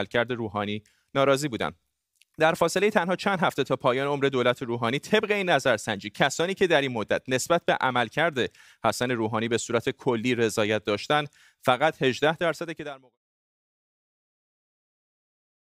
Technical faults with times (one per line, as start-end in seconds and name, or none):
none